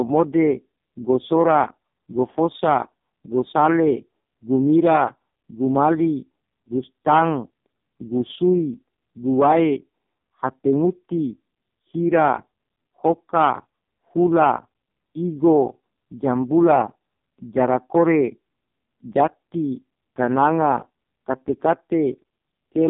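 Throughout the whole clip, the speech has been carried through the AMR narrowband mobile codec. The signal was squeezed into a telephone channel, and the heavy damage points to the codec's lowest mode, around 4.75 kbps. Nothing reaches above 3.7 kHz and little below 150 Hz, so the speech sounds thin and boxed-in. With so few bits for each 20 ms frame, the vocal-tract model is driven by a sparse pulse excitation, which makes the speech buzzy, rough and noticeably synthetic.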